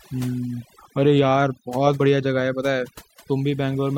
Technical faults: overdone noise removal

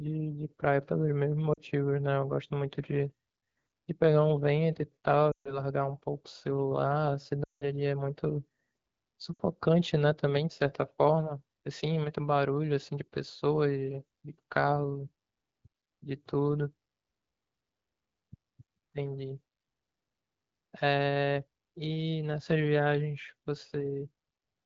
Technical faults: lost AMR speech frames

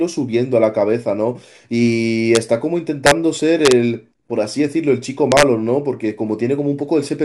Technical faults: integer overflow

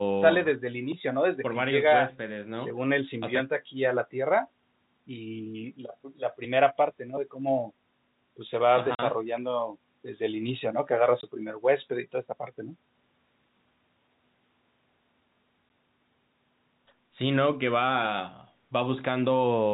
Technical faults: packet loss filled with silence

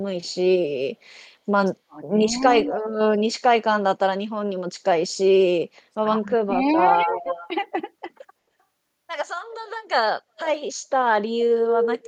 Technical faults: speech suppressed in double talk; echo leak

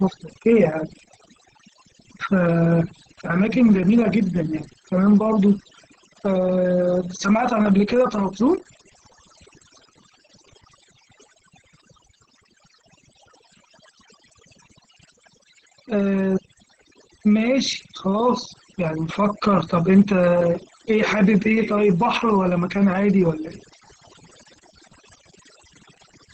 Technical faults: overdone noise removal; Opus voice compression

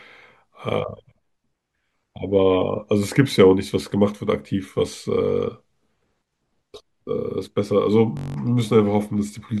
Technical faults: system hang loop

